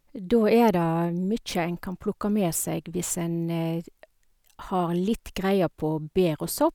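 No technical faults can be heard anywhere in it.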